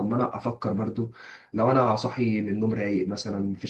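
Nothing goes wrong anywhere in this speech recording; it simply sounds like a call line doing its ordinary job, with the bandwidth topping out around 12 kHz in a way that fits an Opus stream at roughly 24 kbps.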